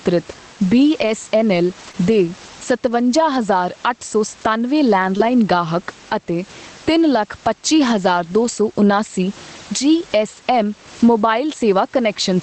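Gain pumping runs through the whole speech clip, with the level swinging by roughly 15 dB. Loud and quiet passages sit closer together than they should, giving a squashed, breathing quality. The likely cause is input gain set far too high for the microphone, with a fast limiter or compressor clamping down on each peak and releasing in the gaps.

The first lost packet rebuilt from error correction is at 1.01 to 1.07 s. That 40 ms stretch, which fits two 20 ms packets, plays without a gap but sounds grainier and noisier than its surroundings. The decoder is substituting the low-bitrate redundant copy carried in the following packet for the original frames. The same roughening recurs at 1.83 to 1.89 s.

Right after it comes a short concealed packet loss at 1.91 to 1.95 s. About 20 ms never arrived in time, so the decoder extended the preceding sound, following its pitch if voiced or using shaped noise if not, before crossfading back into real audio. 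It comes across as a brief smear or wobble. A second concealment at 5.17 to 5.21 s overlaps a single-packet error-correction rebuild at 5.19 to 5.21 s. The smear there blends into a short patch of coarser texture.

A further two-packet error-correction rebuild at 8.43 to 8.49 s and a single-packet one at 10.99 to 11.01 s add the same brief rough, noisy grain.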